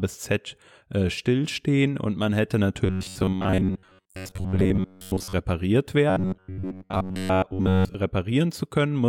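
From 2.86 to 5.33 s and again from 6.10 to 7.94 s, the speech turns into a rigid metallic buzz at about 94 Hz. This robotic sound from repeated short buffers likely comes from roughly 10.7 ms segments being looped while most of the real audio is skipped.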